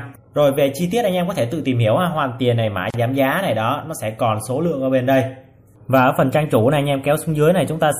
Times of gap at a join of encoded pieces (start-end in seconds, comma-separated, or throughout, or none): 2.90-2.94